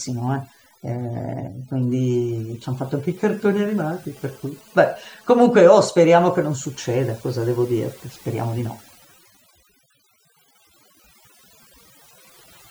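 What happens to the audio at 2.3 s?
At 2.3 s the speech carries GSM signalling bursts, running from 1.68 s to 4.06 s. A nearby 2G phone sending short radio bursts while signalling is being rectified by the audio circuitry, giving a galloping dit-dit-dit of short 217 Hz buzzes, far below the speech level.

Overdone noise removal is also active here, as it is across the whole clip. An over-aggressive noise reducer pulls individual frequency bands down whenever they sit near its noise estimate, taking quiet speech detail with them, so the background drops and breaks up into twinkling, warbling specks.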